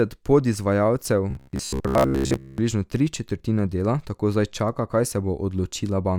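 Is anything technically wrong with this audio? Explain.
Yes. From 1.31 to 2.58 s, just before "tri četrtine dela tako", the speech takes on robotic sound from repeated short buffers. The likely cause is audio arriving too late, so playback keeps looping a snippet of roughly 15 ms while fresh audio is dropped, for most of that stretch. The looping imposes a steady buzz near 66.7 Hz. That fixed pitch separates it from codec warble, which smears the sound without holding one tone.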